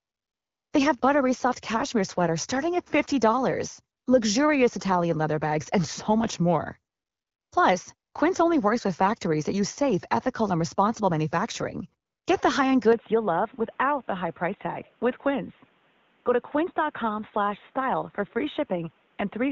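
AMR comfort noise appears at 0.0 to 0.71 s, 3.97 to 4.05 s, 6.93 to 7.51 s, 7.95 to 8.13 s and 12.05 to 12.25 s. In each stretch the handset treated the input as silence and stopped sending speech frames. The receiving end filled the gap with synthetic noise built from a rough level and spectral description. The actual room background gives way to a smooth, even hiss that switches in and out. The longest patch opens the clip, and the 80 ms one at 3.97 s is only a brief flicker.

From 12.93 s to the end the sound changes character at once, with no gap at the transition. Nothing above 3.8 kHz remains, so the audio turns duller and more boxy. The level drops a few decibels, and a different, low background noise sits well under the speech. The band-limiting, the shift in tone and the new noise floor together point to the input being switched to a poorer device, most likely a headset in its call profile or a second, lower-grade microphone.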